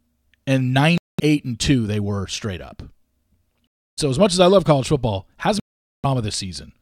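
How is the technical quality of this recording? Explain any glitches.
The speech is interrupted by three Bluetooth dropouts, at 0.98–1.20 s, 3.67–3.99 s and 5.60–6.06 s, growing from about 0.21 s to 0.44 s. The likely cause is audio packets missing their delivery deadline to the headphones and being discarded. Output goes silent, then resumes further along, as though playback continued unheard. Waveform and spectrogram show flat, empty gaps.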